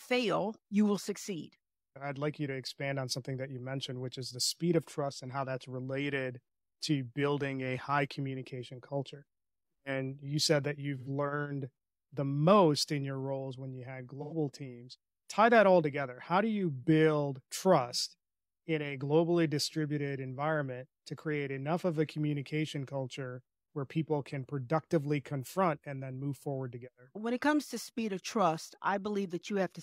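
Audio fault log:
10.97–11.09 s and 14.22–14.33 s, AAC frame loss with concealment: right after "you said that" and again after "roles when you had", the speech turns briefly smeared and phasey, with a noisy blur lasting about 85 ms each time, consistent with two consecutive lost frames. The decoder had no data for those moments and patched them from the last good spectrum, reusing its energy with scrambled phase, so the gap is covered by a hazy echo of the preceding sound rather than by silence.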